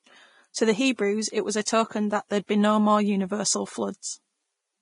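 From the start, the speech carries heavy damage that is most likely Vorbis compression. The treble has been quantised so coarsely that fine detail turns into grainy hiss, and everything above 10.6 kHz is gone. The sound points to a low bitrate, somewhere near 29 kbps.

There's pre-echo from 0.54 to 0.56 s and again at 1.65 s. In each case a sharp attack landed late in a transform block, so the block's noise leaked into the quiet moment before it. You hear a brief hiss of up to 20 ms, then a softened, smeared onset.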